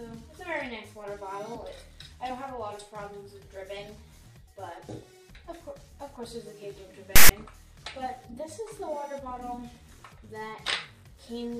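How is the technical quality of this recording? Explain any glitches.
There is one glitch. File tags played as audio, from 7.16 to 7.30 s: a block of text metadata was read as samples, giving a hard-edged, lopsided rasp that drops into silence where zero padding follows.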